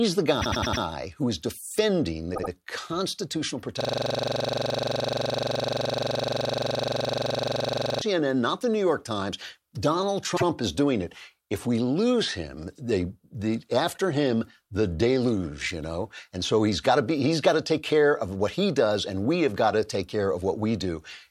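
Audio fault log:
0.41–0.82 s, 2.34–2.50 s, 10.36–10.44 s: repeated frames. Short blocks of compressed audio replay: about 104 ms four extra times at the start, 78 ms twice after "who is defending", and once before "is doing it". The result is a brief stutter, only a few repeats long.
3.81–8.01 s: system hang loop. A 42.67 ms slice, which fits a 2048-sample ring buffer, cycles exactly 99 times at 23.4 Hz until "not the". Because the slice is so short and repeats so many times, it fuses into a steady buzz rather than a stutter.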